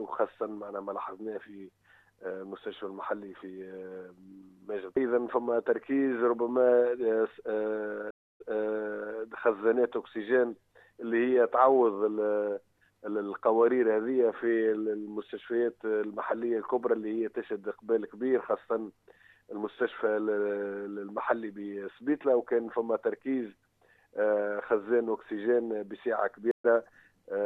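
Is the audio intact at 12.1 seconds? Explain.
Yes, at 12.1 seconds the audio is intact, with no dropout, click, distortion or other fault at that moment.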